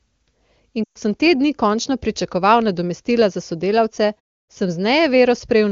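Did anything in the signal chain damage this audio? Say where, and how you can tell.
Yes. There are lost AMR speech frames from 0.84 to 0.98 s, and the fault sits on the radio link. The speech there drops to near silence within two frames. Its roughly 120 ms length fits about six 20 ms frames. Radio errors broke the frames' checksums. The AMR-WB decoder then repeated the last good pitch and vocal tract settings at falling gain. The voice resumes weak or rough for a moment.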